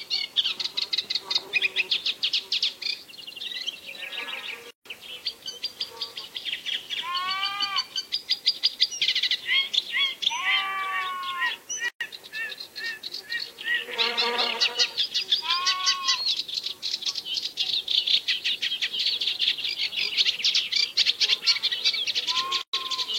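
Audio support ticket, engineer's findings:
Three abrupt dropouts to silence in continuous sound, softened edges, with the sound resuming where it stopped: 4.71–4.86 s (about 149 ms), 11.88–12.01 s (about 123 ms), 22.62–22.73 s (about 119 ms). Gap at a join of encoded pieces. Segments encoded separately and concatenated untrimmed. Each encoder pass leaves its start-up delay silence and last-frame padding in the stream. Codec smears the edges.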